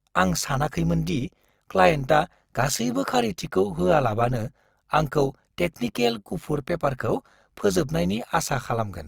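Speech, with overlap-add ripple present from start to finish. The level pulses at around 100 times a second, swinging by about 11 dB, which gives the voice a metallic buzz rather than a steady tone. The audio was processed in short windowed frames, and the overlapping windows were recombined without summing to a constant gain. The ripple rate points to frames spaced roughly 10 ms apart.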